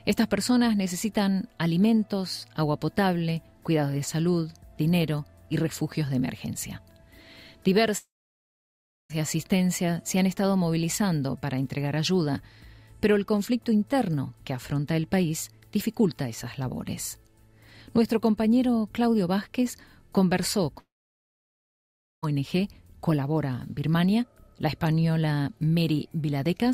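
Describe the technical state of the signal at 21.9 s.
At 21.9 s the signal sits inside a long network dropout running from 20.79 to 22.24 s, likely caused by lost packets. A brief fading buzz or hiss soon gives way to near-silence, appearing as a flat waveform and empty spectrogram until audio resumes, about 1.4 s of it gone.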